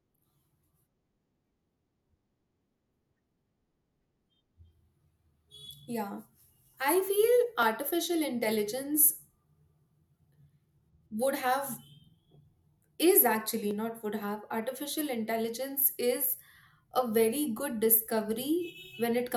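Three isolated clicks land in the speech at 7.63 s, between "I feel" and "artificial intelligence", at 13.71 s, after "is actually" and before "not would", and at 17.58 s. Each is most likely dropped samples: well under a millisecond of audio is missing, so the waveform jumps straight to a later value. Unlike a dropout, no sound audibly goes missing. All you hear is one sharp tick, a thin vertical line in the spectrum.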